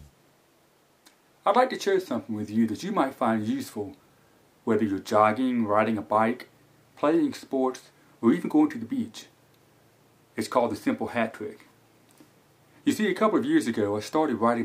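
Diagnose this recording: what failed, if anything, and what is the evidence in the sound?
Nothing failed; no faults heard.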